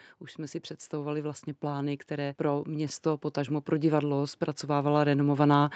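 From about 0.35 s right through to the end, you get automatic gain rising: the gain control decided the input was too quiet and kept nudging its gain upward, so the speech and the room noise behind it swell together rather than the speech alone getting clearer. It's a slow creep over several seconds, not a jump. The top end stops around 8 kHz, which fits an Opus call running in wideband mode.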